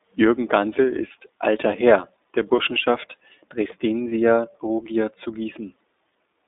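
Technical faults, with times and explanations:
Throughout, iLBC codec: the audio is confined to a phone band of about 250 Hz to 3.7 kHz, and each 20 ms frame's excitation is coded on its own, consistent with the 15.2 kbps mode. This makes the speech plainly rough and slightly synthetic.
2.56–2.59 s and 4.10–4.12 s, lost iLBC frames: a single 20 ms frame drops out each time. The decoder fills the gap by repeating the last pitch cycle with added noise, giving a brief held, buzzy vowel that clears immediately because the next frame decodes independently.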